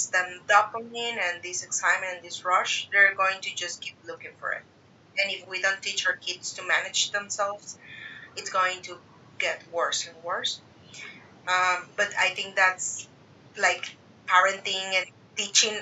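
No technical faults occur at any point in the speech.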